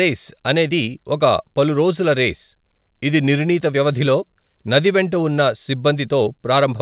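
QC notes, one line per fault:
No faults heard.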